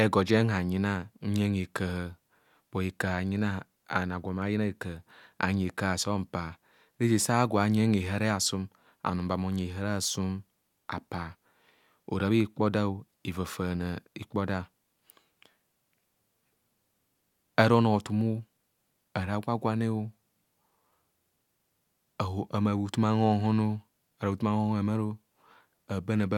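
Nothing in the speech stood out as a technical fault on listening.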